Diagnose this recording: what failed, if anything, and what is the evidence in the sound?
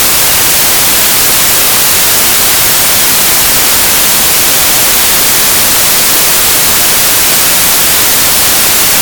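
The failure is in sample-format conversion, with samples built from the wrong bytes. From start to finish the audio is loud, harsh broadband noise. Each sample's bytes are misassembled, so the rapidly changing low bits dominate every value.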